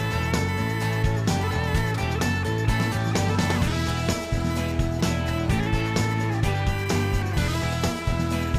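Computer activity noise runs throughout: a buzzing chirp pulsing at around 1 kHz, roughly 20 dB below the signal, from computer load changes disturbing the shared audio ground.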